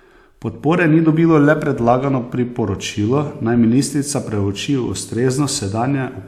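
Speech recording with no technical faults audible at any point.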